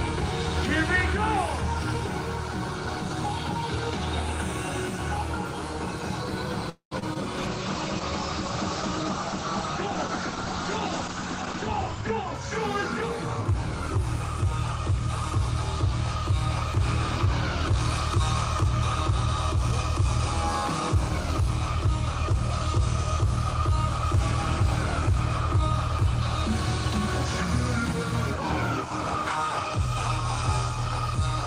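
A call audio freeze runs from 6.69 to 6.93 s: the sound stretches into a fading buzz and then about 110 ms of silence, likely because delayed packets left the jitter buffer empty. About 219 ms of filler is inserted, and playback resumes where it stopped with nothing lost.

Short concealed packet loss follows at 6.99 to 7.04 s and again at 7.14 to 7.17 s. Each time about 20 ms of audio failed to arrive, and the receiver extended the preceding sound to cover it, leaving a brief smear or wobble before blending back.

A call bitrate drop lasts from 7.38 to 12.41 s. The encoder's rate falls from 32 to 11 kbps, staying at its lowest for about 4.8 s, and the bandwidth shrinks from 20 kHz to 8 kHz, so the audio turns coarse and muffled until it recovers.

A jitter buffer speed-up occurs from 11.13 to 12.03 s at 106% speed, and a milder one from 20.95 to 23.69 s at 102%. Each time the receiver trimmed roughly 70 ms of excess buffered audio by cutting short pitch-period slices, so the sound runs faster at unchanged pitch, hurried-sounding in the first.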